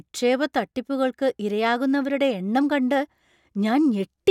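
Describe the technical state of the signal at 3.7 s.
At 3.7 s the signal is intact, with no audible fault at that moment.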